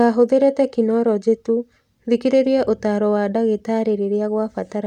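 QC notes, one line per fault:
Nothing to flag here, and the speech comes across without a single problem worth noting.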